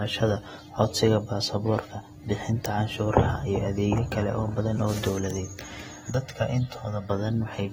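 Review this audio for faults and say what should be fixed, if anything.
Throughout the speech there is a dull, smeared quality with a fizzy, warbling edge on sibilants, and nothing is present above 16.7 kHz. This is likely AAC compression at a low bitrate, with AAC-LC at around 36 kbps fitting what is heard. The hearing model discards detail it judges masked, so quantisation noise smears transients and bands thin out. On a spectrogram there is a hard ceiling at 16.7 kHz, with patchy holes and blurred energy below it. To prevent it, encode at a higher bitrate or keep a lossless master.

From 6.10 to 7.10 s the sound turns hollow and phasey. This is channel delay (comb filtering): one channel arrives roughly a millisecond and a half late, and when the channels are summed to mono, the shared content cancels at evenly spaced frequencies. The first notch falls around 300 Hz. On a spectrogram that second shows fixed dark horizontal stripes at regular intervals. 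To prevent it, keep the channels sample-aligned before any mono fold-down.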